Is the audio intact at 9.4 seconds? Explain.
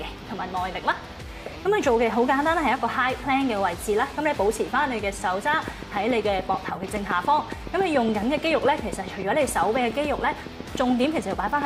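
No. A train of clicks runs from 5.54 to 11.63 s, regular ticks at 7.07 per second, around 10 dB above the sound, likely from interfering equipment.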